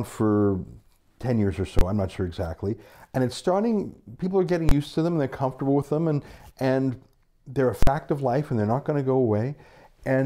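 Invalid numbers at full scale strike at 1.79–1.81 s after "years or", 4.69–4.71 s after "starting people are getting", and 7.83–7.87 s after "and and they're a". Each is a flat slab at one extreme value, far beyond the speech peaks, on the waveform and a bright full-height vertical stripe on the spectrogram. The first two last about 23 ms and are heard as single bangs, consistent with a 1024-sample block. The third lasts about 46 ms, fitting a 2048-sample block.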